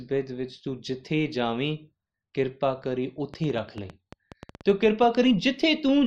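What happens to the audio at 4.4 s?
At 4.4 s the speech sits inside a train of clicks running from 3.34 to 5.04 s: roughly fifteen similar pulses at an uneven pace averaging 8.25 per second, each about as loud as the speech itself. It is heard as irregular ticking over the sound, likely from interference or a faulty connection. A spectrogram shows thin vertical lines spanning the full frequency range; the waveform shows sharp, narrow spikes at unequal intervals.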